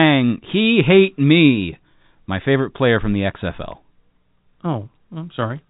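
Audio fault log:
No faults logged; the speech carries G.711 telephone coding, with nothing above 3.8 kHz as that narrowband format dictates.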